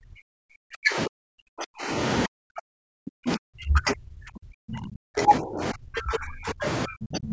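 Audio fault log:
0.0–1.97 s, 2.26–6.65 s and 6.86–7.32 s: speech suppressed in double talk. The speech sinks repeatedly, at its deepest by roughly 40 dB and by roughly 35 dB in the final stretch. This is likely an echo canceller that could not separate the talker from loudspeaker echo while both sides spoke, so it turned everything down.
6.61–6.67 s: other side's voice leaking through. A brief scrap of a second voice surfaces at roughly 10 dB below the speech. This is likely loudspeaker playback picked up by the microphone that echo cancellation failed to remove completely.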